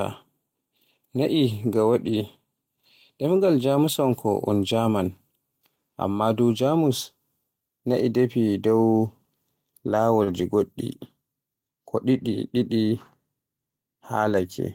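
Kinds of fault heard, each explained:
Lost packet rebuilt from error correction: Packets went missing twice, but each following packet carried a low-bitrate backup copy, and the decoder played those copies instead of leaving a hole. Nothing drops out. Instead, from 2.05 to 2.15 s and again from 10.27 to 10.41 s, the sound turns briefly coarser and noisier. Those stretches of about 60 ms and 80 ms fit three and four separate lost packets respectively.
Short concealed packet loss: Around 10.23 to 10.29 s, about 40 ms of audio failed to reach the decoder in time and had no backup copy to fall back on. The receiver invented a fill by extending the last sound it had, then blended back toward real audio. This produces a short smeared patch. It runs directly into the rougher rebuilt stretch that follows, so the disturbance there lasts longer than the one near 2 s.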